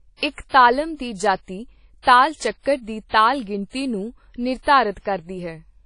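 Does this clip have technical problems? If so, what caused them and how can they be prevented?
Yes. WMA compression throughout: speech sounds washy and ringing, nothing above 10.1 kHz, likely from low-bitrate encoding, around 32 kbps. Prevent it by encoding at higher bitrate or keeping lossless masters.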